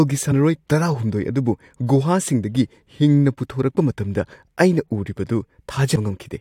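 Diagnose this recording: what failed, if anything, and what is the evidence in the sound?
Codec stage: compressed frames skipped. The speech jumps ahead at 0.30 s and 5.95 s, losing about 100 ms and 70 ms.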